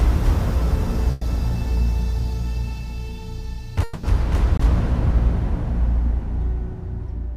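At 1.11 to 1.23 s, a burst of packet loss leaves about 100 ms missing. The receiver stretches the last sound into a fading buzz or hiss, seen on a spectrogram as smeared, decaying energy.

From 3.83 to 4.05 s, the sound is replaced for about 200 ms by a held, fading continuation, likely a long network dropout. The waveform shows a repetitive, shrinking envelope, then a jump ahead.

At 4.57 to 4.61 s, a short concealed packet loss fills about 20 ms, heard as a quick smear. A spectrogram shows a brief blurred patch before the detail returns.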